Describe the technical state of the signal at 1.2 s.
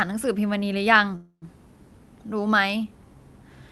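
At 1.2 s the signal is inside a call audio freeze running from 1.15 to 1.45 s. The sound stops advancing and the last fragment is stretched into a fading buzz or hiss, ending in about 70 ms of silence. This likely comes from delayed packets leaving the jitter buffer empty. When the audio resumes, nothing is lost, but everything after it arrives about 265 ms later. On a spectrogram the frozen stretch shows as a flat, smeared band of repeated spectral content that fades, topped at the 12 kHz ceiling of the call path, followed by a short blank strip. In the waveform it appears as a dwindling, looping envelope that falls to near zero before normal activity returns.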